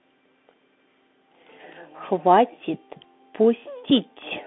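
Throughout, the speech carries the Bluetooth CVSD headset codec. It is confined to roughly 200 Hz to 3.6 kHz, s sounds turn scratchy, and a granular hiss lies beneath, which fits 64 kbps one-bit delta coding whose step lags loud highs. Plain band-limiting would lack that grit.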